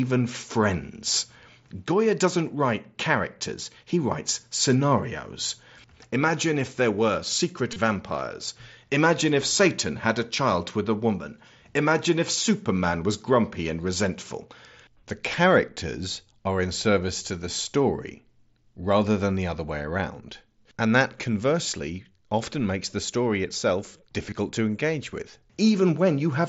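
At 7.72 to 7.78 s there's concealed Bluetooth headset packet loss. Packets dropped across about 60 ms, the longest gap about 22 ms, and the phone filled them by repeating recent waveform, giving a short buzzy smear. A brief patch recurs at 24.30 s.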